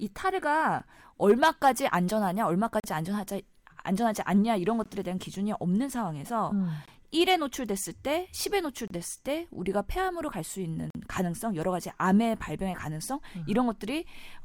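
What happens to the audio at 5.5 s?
Nothing goes wrong at 5.5 s; the speech carries on intact through that moment with no audible fault.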